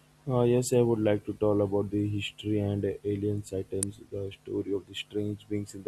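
Speech, with one electrical switching spike at 3.83 s, between "history and uh alien" and "the story of": a single sharp snap peaking around -10 dBFS, likely an arc from a nearby switch picked up by the audio line.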